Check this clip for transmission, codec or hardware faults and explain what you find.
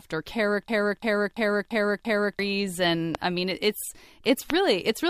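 Three faults are audible in this speech clip: one system hang loop and two loud pops.

System hang loop, 0.68 to 2.39 s: the driver stalled while the hardware replayed one 341 ms buffer, which fits a 16384-sample buffer, five times at about 2.9 Hz. It is heard as a slow stutter, and about one and a half seconds of audio is lost.

Loud pops, 3.15 to 3.17 s and 4.50 to 4.52 s: each is a single sharp pop over the continuing speech, about 15 dB and 20 dB above the signal, likely from a voltage step such as a switch or a driver glitch.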